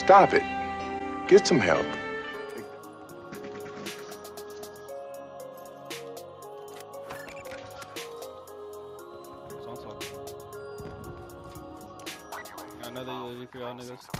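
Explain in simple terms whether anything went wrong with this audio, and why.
Nothing went wrong here: from the first moment to the last, the signal holds together with no breaks, glitches or damage that a listener would notice.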